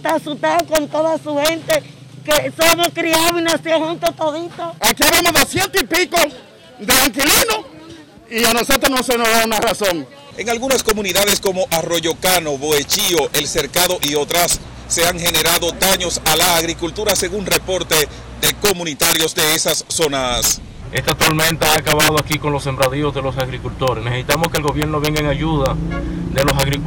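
Violent, sharp cracks break out across the whole clip wherever the sound gets loud, far harsher than ordinary clipping. This is integer overflow: the signal was pushed about 8 dB past the largest value the integer format can hold, and instead of being limited at the ceiling, each peak wrapped around to the opposite sign. Only a small share of samples, around 2 percent, cross that line, but every one jumps across the full range, producing the cracks.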